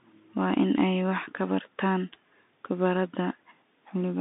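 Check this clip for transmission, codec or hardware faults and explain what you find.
The whole clip runs through a Bluetooth CVSD headset codec, start to finish. CVSD sends a single up-or-down bit per sample and adapts its step size as it goes, which fits a 64 kbps headset link. Here the band sits at roughly 200 Hz to 3.7 kHz with nothing above 3.8 kHz, so the speech sounds boxed-in and telephone-like. The codec damage is plainly audible: a grainy hiss rides under everything, and loud, bright moments outrun the step size and turn rough.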